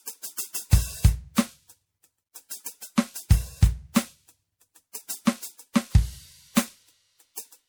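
Generation loss runs through the whole of this music clip. It sounds swirly and hollow, with a smeared texture and softened, blurred attacks. The likely cause is repeated lossy coding: the audio seems to have been decoded and re-encoded about four times, each pass quantising again on a shifted frame grid so that noise and spectral gaps build up. The character fits a 96 kbit/s MP3 chain, and nothing remains above 20.8 kHz.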